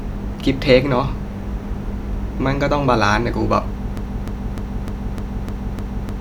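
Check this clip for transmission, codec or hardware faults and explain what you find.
One fault is present. From 3.97 s to the end, a broken-record loop: playback or streaming likely stalled and resent its last 0.3 s fragment, which repeats seven times, replacing the speech that should follow.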